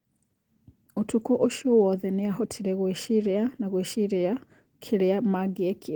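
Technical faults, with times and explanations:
throughout, Opus voice compression: the speech sounds hoarse and slightly robotic, with clear coding damage even though the band reaches about 20.2 kHz. The coder splits the band, predicting speech below 8 kHz and coding the top coarsely, which fits roughly 16 kbps.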